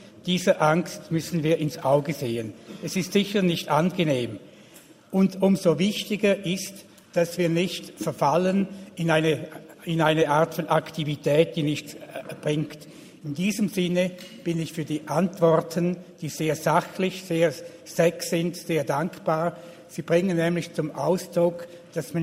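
Small, uneven hiccups run through the audio from 0.11 s to the end, with the flow lurching forward as though tiny slivers were being skipped, which gives an unsteady, slightly hurried tempo. These are repeated timing corrections. The receiver keeps trimming short pieces so that playback averages roughly 104 percent of normal speed. Every edit goes the same way, removing rather than repeating material, but they fall at irregular spacing, so no steady rhythm of glitches forms. The underlying cause is clock drift between sender and receiver. The sending device's clock runs fast, by about 5 percent, so it delivers audio faster than the receiving side consumes it. The jitter buffer keeps filling, and the only way to hold latency down is to discard small chunks again and again. That is why the hiccups persist across the whole clip instead of clustering at one moment.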